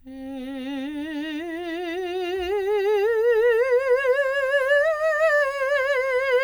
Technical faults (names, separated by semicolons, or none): none